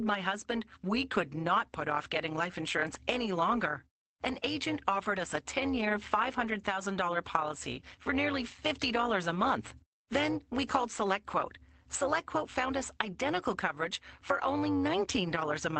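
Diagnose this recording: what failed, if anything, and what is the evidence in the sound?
A metallic buzz runs throughout, with level swinging by about 11 dB around 200 times a second. This is overlap-add ripple in call processing, where frames are recombined without constant gain.

Between "a month" and "we called", 10.29 to 10.39 s turns rougher and noisier. This is a lost packet rebuilt from error correction: network loss concealed by Opus's low-bitrate redundant copies.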